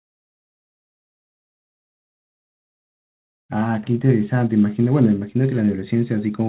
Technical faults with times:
none

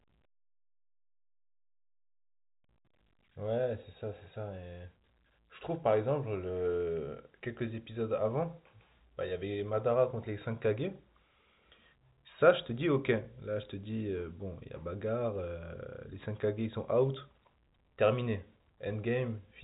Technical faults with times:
none

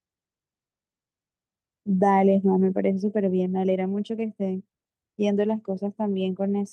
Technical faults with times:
none

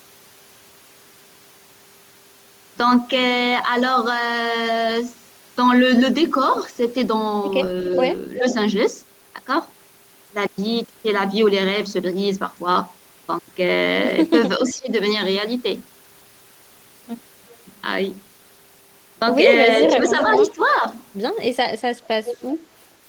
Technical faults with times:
7.93-8.00 echo leak
8.34-8.54 echo leak
14.57-14.90 speech suppressed in double talk
17.50-17.56 echo leak
19.84-20.54 echo leak
19.92-20.83 speech suppressed in double talk
22.25-22.35 echo leak

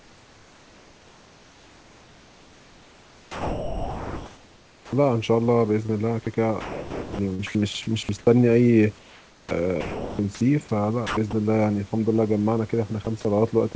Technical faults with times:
0.00-4.92 comfort noise in place of the background
4.87-4.92 onset clipped by the voice detector
5.86-5.91 short concealed packet loss
6.61-8.27 sound chopped by the voice detector
8.99-10.19 sound chopped by the voice detector
11.07-11.33 sound chopped by the voice detector
13.05 sound dropped by the voice detector
13.73 sound dropped by the voice detector

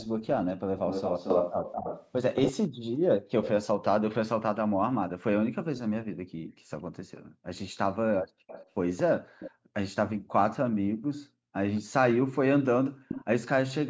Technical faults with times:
0.00-3.84 echo leak
2.69-2.83 background gated by the echo canceller
5.76-9.51 echo leak
6.07-7.49 background gated by the echo canceller
9.32-13.00 background gated by the echo canceller
11.76-13.25 echo leak

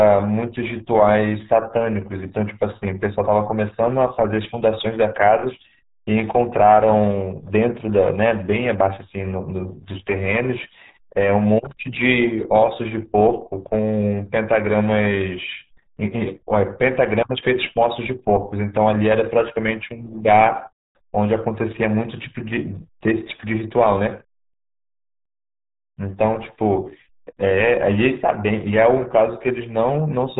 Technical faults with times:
0.00-30.39 RealAudio 14.4 codec

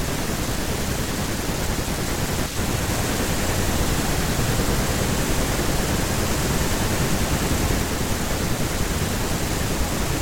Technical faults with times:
2.89-7.83 doubled audio track

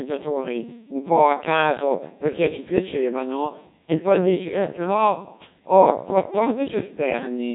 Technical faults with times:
0.00-7.55 Codec 2 vocoder

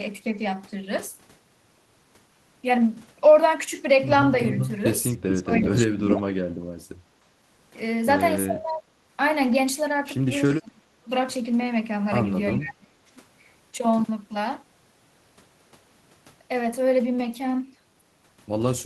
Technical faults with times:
4.46-4.70 echo leak
5.29-6.13 echo leak
5.42-6.22 speech suppressed in double talk
8.46-8.84 speech suppressed in double talk
10.45-11.11 speech suppressed in double talk
12.52-13.11 speech suppressed in double talk

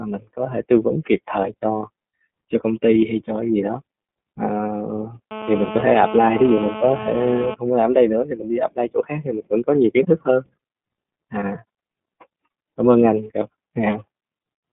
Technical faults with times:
0.00-14.73 iLBC codec
5.31-7.54 GSM phone buzz

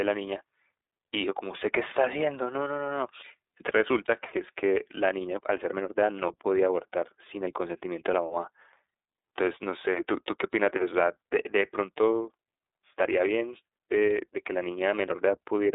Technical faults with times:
0.00-15.74 iLBC codec

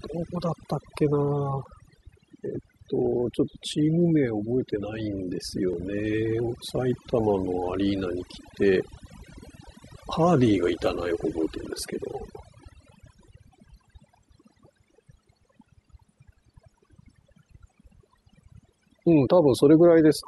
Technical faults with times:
0.00-20.27 overdone noise removal
0.63-5.73 periodic USB or driver dropouts

